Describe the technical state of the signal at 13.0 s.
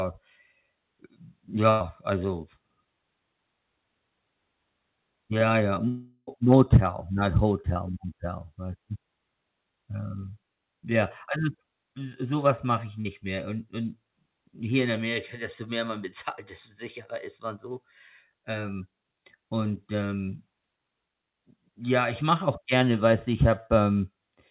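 Right after "so sowas mache ich", from 13.01 to 13.07 s, the audio briefly smears and wobbles. This is short concealed packet loss. About 40 ms of the call reached the decoder too late, so the receiver extended the preceding sound, pitched if voiced or as shaped noise if not, then blended back into the real signal.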